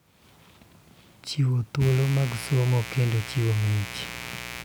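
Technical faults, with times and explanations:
1.79 to 4.65 s, mains buzz: a steady, raspy buzz kicks in and sits fairly prominently under the speech until the end. It's built on 60 Hz, with sharp interference spikes twice per mains cycle throwing harmonics well up into the kilohertz range.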